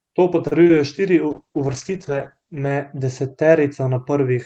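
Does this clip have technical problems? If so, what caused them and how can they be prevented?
Yes. At 0.47 to 0.54 s there is a short stall from a late packet. A packet arrived late, so the jitter buffer ran dry and the receiver held the last sound for 41 ms, then resumed from the same point. Unlike packet loss, nothing is missing; the sound is just stretched, and playback sits 41 ms later afterwards. A jitter buffer with a little more headroom would prevent this.

Short concealed packet loss occurs twice: from 0.64 to 0.79 s and from 0.67 to 0.71 s, each time with 20 ms of audio never arriving. The decoder extrapolated the preceding sound to cover the gap, leaving a brief smear or wobble. Unlike the stall, real content is gone here. Forward error correction such as Opus in-band FEC, or retransmission, would prevent it.

From 1.31 to 3.43 s there is a call bitrate drop. The bandwidth estimate fell, so Opus went from 32 to 9 kbps, holding its lowest rate for about 1.4 s, and narrowed its bandwidth from 12 kHz to 8 kHz. 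The sound turns muffled and rough. Unlike the brief packet glitches, this degradation lasts about two seconds. A steadier network link or a higher minimum bitrate would prevent it.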